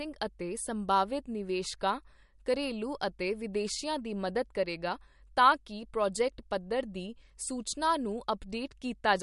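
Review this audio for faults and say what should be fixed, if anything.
Throughout, the speech sounds plainly watery and swirly, with nothing above 11.2 kHz. This is likely MP3 compression, starved of bits in a way that fits about 50 kbps. To prevent it, encode at a higher bitrate or deliver a lossless file.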